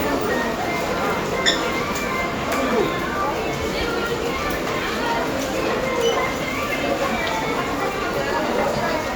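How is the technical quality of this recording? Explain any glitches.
Listening through these everyday sounds, nothing stood out as a technical problem.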